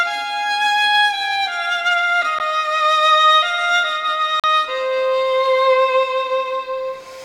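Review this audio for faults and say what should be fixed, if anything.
Two short holes cut the sound: one of about 13 ms at 2.39 s and one of 40 ms from 4.40 to 4.44 s, likely a Bluetooth dropout, with late packets discarded and silence until good ones arrived. The gaps' lengths fit one packet and three. Unlike a stall, the sound resumes further on rather than where it stopped. Keep the headphones close with a clear line of sight and away from crowded 2.4 GHz traffic.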